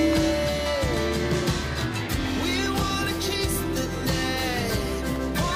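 Periodic USB or driver dropouts recur through the audio: something is stalling the USB link or the audio driver every 0.5 s, and each stall loses roughly a millisecond of audio, replaced by silence. From 0.16 s to 5.16 s this gives around ten evenly spaced gaps, heard as a steady ticking, a small click or pop every half second wherever signal is present, with a metronome-like regularity that points to a recurring background task rather than random interference.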